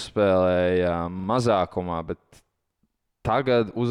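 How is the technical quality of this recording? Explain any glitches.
The speech has two audible glitches, both the same kind. At 1.20 to 1.28 s and again at 2.90 to 2.99 s, a short slice of about 43 ms sounds three times with hard joins, a quick stutter. This is a repeated buffer: new audio arrived late, so the device replayed its last block twice, which fits a 2048-sample buffer, with essentially nothing missing afterwards.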